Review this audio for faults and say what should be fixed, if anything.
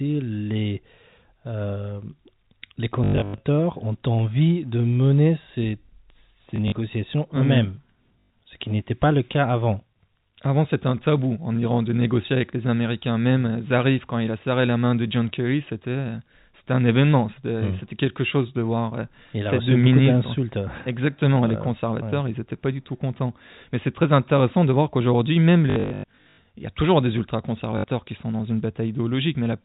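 You'll hear packet loss with the last packet repeated in five spots: 3.04 to 3.4 s just before "ont envie de mener", 6.56 to 6.72 s, 8.2 to 8.3 s right before "ce qui n'était pas", 25.7 to 26.38 s after "de voir qu'aujourd'hui même", and 27.78 to 27.84 s. The receiver loops the last good chunk until fresh audio arrives, so the runs buzz at about 50 Hz, which points to 20 ms packets. The worst stretch scatters roughly 440 ms of gaps across 680 ms, with repeats up to 100 ms long, giving a robotic stutter over the narrowband telephone sound. To prevent it, fix the packet loss on the network path and add proper loss concealment or a deeper jitter buffer instead of straight repetition.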